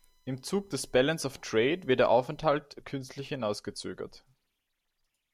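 From 0 to 2.40 s, a faint USB whine from 1 ms bus frames shows as spectrogram lines every 1 kHz, brightest at 4 kHz.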